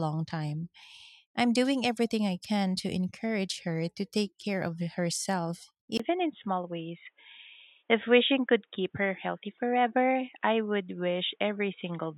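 At about 5.98 s, right after "take care of herself", a gap of roughly 20 ms is followed by a sudden change in tone that lasts to the end of the clip. Nothing above 3.8 kHz comes through, so the speech turns dull and boxy while the level stays about the same. A new noise floor sits roughly 50 dB under the signal. The cause is likely the input switching to a poorer device mid-recording.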